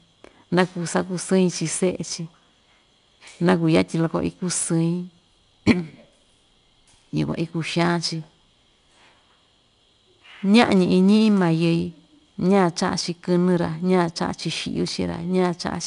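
From start to finish the speech has passed through 4-bit ADPCM compression, where each sample is coded as a small step from a predicted value and the step size keeps adapting. The coding error rides with the signal, so every loud syllable carries a plainly audible gritty hiss and sharp onsets roughen where the step lags behind. Nothing remains above 10.6 kHz, which fits a data rate near 89 kbps, and the top end sounds dulled.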